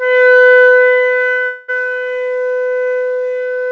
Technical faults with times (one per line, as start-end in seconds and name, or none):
1.46-1.70 call audio freeze